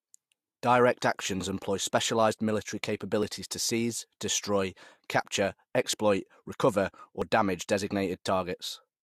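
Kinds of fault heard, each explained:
Overlap between stream segments: two segments' time stamps overlapped, so about 5 ms of real, undoubled speech was cut at 7.22 s, heard as a single tiny click or skip; the waveform shows an abrupt step there, and the spectrogram a thin vertical broadband line.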